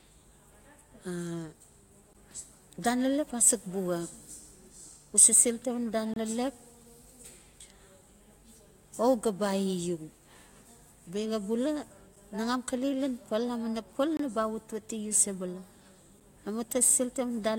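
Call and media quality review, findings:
Gap between stream segments. Hard-edged silent holes at 2.13 s, 6.14–6.16 s, 14.17–14.20 s, 16.20 s, about 8–26 ms each. Segment timestamps misalign at 2 s boundaries, so the player inserts silence.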